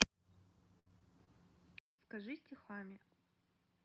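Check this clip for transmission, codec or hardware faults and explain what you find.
Two faults are present.

From 0.79 to 1.29 s, repeated packet loss (robotic sound): four dropouts, the longest 64 ms, are patched by repeating earlier sound, so it turns choppy. The spectrogram shows smeared, repeated frames.

From 1.79 s to the end, the input switched to a poorer device, likely: 200 ms of silence, then duller sound about 10 dB quieter. The spectrogram shows a hard ceiling near 5.5 kHz.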